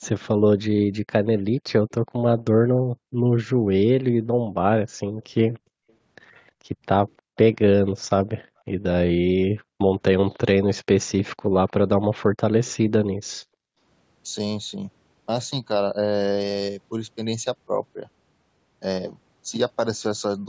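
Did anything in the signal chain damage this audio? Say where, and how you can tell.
Yes, in the call processing on the far end, where the echo canceller failed in two ways. The first is echo leak. From 0.01 to 2.42 s, 5.9 to 7.92 s and 10.33 to 12.73 s, a faint copy of the speech trails the original by 309 ms and sits roughly 30 dB below it. The fixed delay and low level most likely mean a loudspeaker's output reached the microphone and the canceller let part of it back into the call.

The second is background gated by the echo canceller. At 4.38 to 5.09 s, 8.52 to 9.79 s and 13.22 to 13.78 s, the room sound drops sharply, by as much as about 40 dB, for a fraction of a second each time, then recovers. That is the canceller's suppressor pulling the microphone down hard while it judged the loudspeaker active and then releasing it, which punches short holes in the ambience.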